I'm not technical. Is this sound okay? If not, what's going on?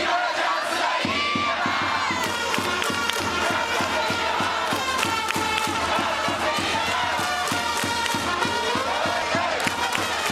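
No. At 3.2 and 9.22 seconds the sound jumps ahead, with no gap of silence. This is likely a dropped buffer (overrun): a tiny slice, roughly a fiftieth of a second, was lost and the two sides were joined directly.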